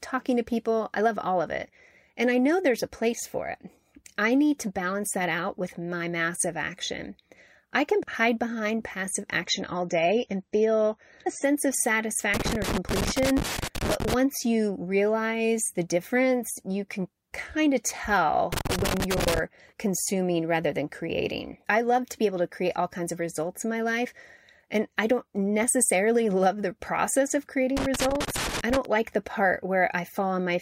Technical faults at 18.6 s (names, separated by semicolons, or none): loose connector crackle